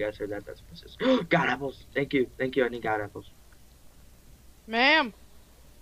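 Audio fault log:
Nothing stood out on listening to the clip.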